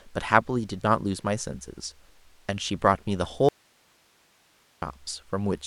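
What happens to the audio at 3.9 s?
An audio dropout to a faint residue runs from 3.49 to 4.82 s. The speech cuts out abruptly, leaving only faint hiss, likely from a live path after a signal break.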